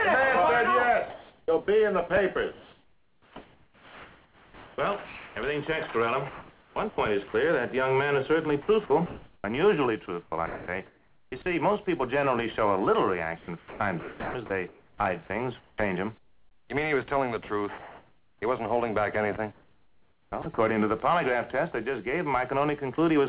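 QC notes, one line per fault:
1.1–5.36 s, 6.3–7.34 s, 8.62–9.44 s, 10.06–11.46 s, 13.38–16.7 s and 19.52–20.58 s: sound chopped by the voice detector. In each stretch the sound repeatedly cuts out and a steady synthetic hiss fills the gaps. About 2.92 s of the first 4.26 s window is replaced, and 1.76 s of the 13.38–16.7 s window. The cause is likely a sender-side voice detector switching transmission on and off several times within each stretch, with the receiver filling the gaps with comfort noise. Its smooth, featureless texture stands in for the missing sound in the gaps. This toggling, rather than a single clean gap, distinguishes it from a drop. The surrounding audio is band-limited to 4 kHz, which fits a G.711 call path.
21.72–21.74 s and 22.96–22.98 s: sound dropped by the voice detector. Each event is a single 20 ms hole where the sound gives way to comfort noise before resuming. 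The voice detector likely treated a quiet moment as background and paused sending for one frame. Unlike the chopped stretches, each event is one isolated gap with no on-off flicker around it, so it comes across as a brief dip rather than a choppy texture.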